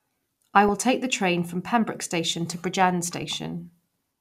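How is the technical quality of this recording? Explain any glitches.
The recording has two brief glitches. DAB burbling at 0.68 s, just before "take the train from", and again at 3.22 s: weak-reception bit errors slip past error correction, briefly putting short blips of noise into individual frequency bands.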